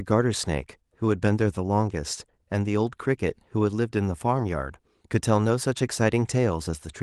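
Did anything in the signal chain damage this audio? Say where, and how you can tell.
Yes, at the network stage: a lost packet rebuilt from error correction at about 4.39 s. On the waveform there's no gap, but a spectrogram shows one roughly 20 ms frame that is blurrier and noisier than its neighbours, because the decoder played the next packet's low-bitrate Opus copy in place of the missing one.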